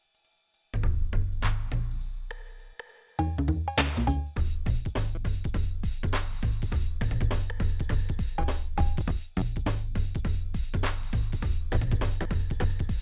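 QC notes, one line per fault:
No faults heard in this clip.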